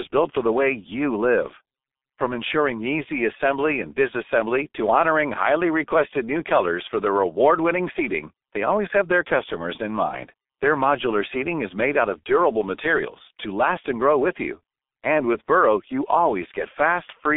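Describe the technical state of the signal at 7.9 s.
At 7.9 s the speech sounds muffled and hoarse, with smeared consonants and nothing above 3.8 kHz, as it does throughout the clip. This is heavy G.723.1 codec damage: a 250 Hz to 3.6 kHz band and a coarse, slowly updated voice model, which fits about 6.3 kbit/s.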